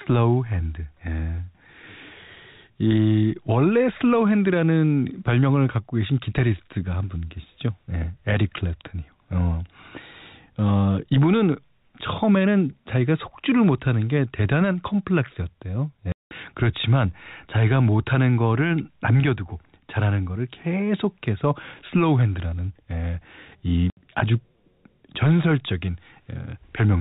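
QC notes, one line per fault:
16.12–16.31 s and 23.90–23.97 s, packet loss filled with silence: gaps of 190 ms and 70 ms drop to silence with hard edges. Both lengths are multiples of 10 ms, which fits 10 ms packets. Concealment would instead repeat or fade the sound across the gap.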